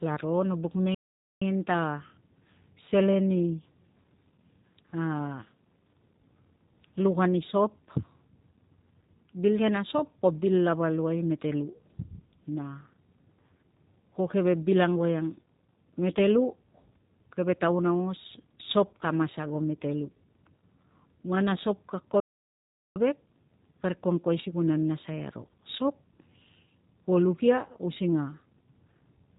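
From the very start the whole clip carries G.729 codec damage, and it's plainly audible. Nothing gets through above about 4 kHz, so the speech sounds boxed-in and telephone-like. There's a slightly rough, synthetic edge too, because the coder rebuilds each short frame from a vocal-tract filter, a pitch predictor and a handful of pulses rather than the actual waveform. That fits a low-rate 8 kbit/s G.729A coder.

Then there are two playback stalls. The first comes right after "no buk" at 0.94 s, where the sound just stops dead for about 0.47 s and picks up again at 1.42 s. The second follows "a sop ka" at 22.2 s, a longer gap of about 0.76 s that resumes at 22.96 s. Both are clean silences in mid-flow, most likely the player running dry of buffered data or its thread getting blocked until it recovered.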